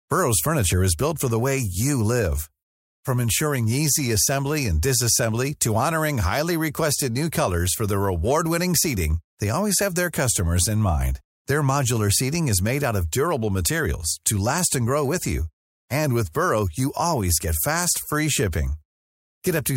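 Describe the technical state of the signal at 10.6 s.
At 10.6 s the speech signal is intact, with no fault audible at that moment.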